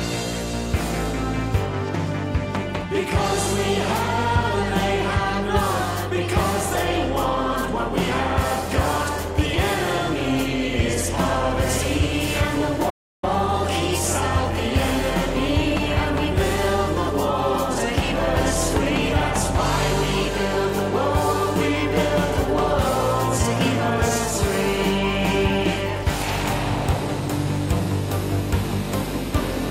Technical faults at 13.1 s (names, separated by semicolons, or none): playback stall